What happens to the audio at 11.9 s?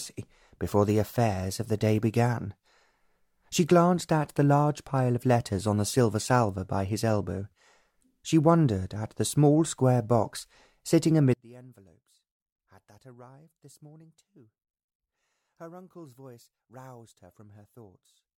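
At 11.9 s the sound collapses to a faint residue, about 26 dB quieter, and stays that way from 11.34 s to the end. The likely cause is one channel inverted: with one stereo side's polarity reversed, everything shared between the channels cancels when summed to mono, leaving only their small differences.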